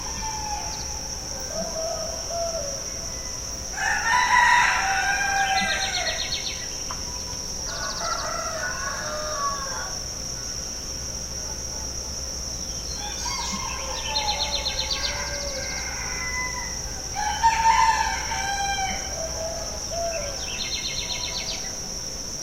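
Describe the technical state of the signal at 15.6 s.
At 15.6 s the signal is intact, with no technical fault audible at that point.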